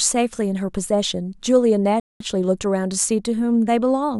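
At 2.00 s the speech stops dead. This is a rebuffering stall. The player ran out of downloaded audio and waited for more. Silence holds until 2.20 s, about 0.2 s. Then the speech picks up exactly where it broke off. Nothing is missing, but the pause lengthens the clip.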